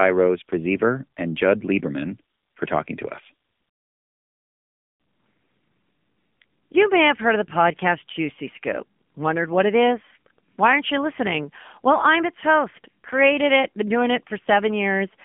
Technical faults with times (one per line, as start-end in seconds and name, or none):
0.00-15.25 AMR narrowband mobile codec